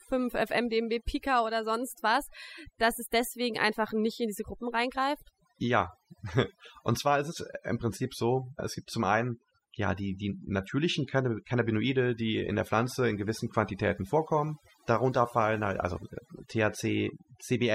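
Throughout the clip, a noise reduction stage has been pushed far too hard, producing overdone noise removal. The processor pulls individual frequency bands down or out entirely whenever their level sits near its noise estimate, and the quieter components of the speech fall below that line along with the noise. The background collapses into near silence speckled with twinkling, chirpy fragments.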